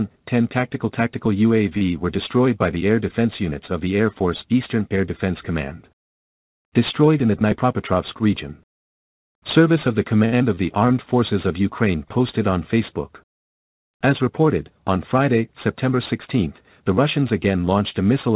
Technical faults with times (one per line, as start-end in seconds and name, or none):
1.78-1.83 short stall from a late packet
7.45-7.93 jitter buffer speed-up
10.25-10.34 short stall from a late packet
10.38-10.42 short concealed packet loss
16.75-17.25 jitter buffer speed-up